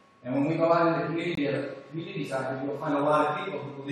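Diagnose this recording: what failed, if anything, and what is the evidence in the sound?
The codec stage failed with a corrupt frame muted. At 1.35 s the sound cuts abruptly to silence until 1.39 s, a gap of about 38 ms that fits a single dropped frame. The decoder rejected damaged data and silence replaced it, so timing is preserved. The waveform shows a flat hole and the spectrogram a clean vertical blank band.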